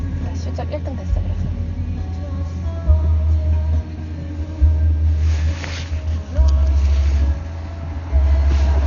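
Dolby Digital compression, throughout the clip: nothing remains above 6.9 kHz, leaving the sound dull, with rough, fluttering noise around tonal parts. That heavy damage is likely from an encoder starving frequency lines of bits and the decoder filling them with dither, which fits roughly 48 kbps.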